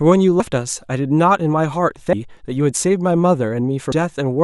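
Compressed frames skipped at 0.40 s, 2.13 s and 3.92 s: the decoder jumps past missing or rejected frames of about 32 ms, dropping roughly 70 ms, 300 ms and 150 ms of speech. At each join the speech jumps ahead.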